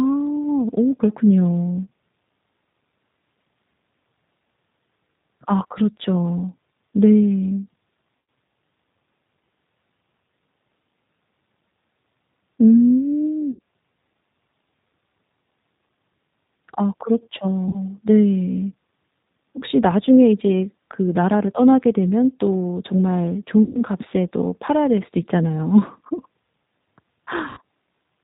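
From start to finish the speech carries the signature of the G.729 codec: nothing above 4 kHz, and a slightly rough, synthetic edge from pulse-coded excitation that fits an 8 kbit/s stream. Unlike plain band-limiting, consonants sound grainy and reconstructed rather than merely dull.

VoIP packet loss concealed by the speech codec then strikes at 8.18 to 8.28 s, 13.51 to 13.61 s, 17.69 to 17.77 s, 23.63 to 23.82 s and 27.49 to 27.61 s. In each gap the decoder stretches the last sound into a fading buzzy tone or coloured noise. Recovery stays weak briefly afterward, which separates this from a clean dropout or click.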